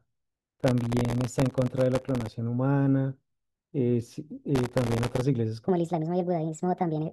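From 0.58 to 2.34 s, and again from 4.55 to 5.21 s, processor overload crackle tears through the speech. Each burst holds around a hundred missed deadlines on very short buffers, well under a millisecond each. At every miss, stale audio is replayed with hard edges, giving a gritty, rapid crackle that stops once the load clears.

From 5.68 s to the end, the section plays at the wrong speed, about 1.42 times too fast. The speech turns hurried and shifts up roughly seven semitones. This is likely from playback against a mismatched clock.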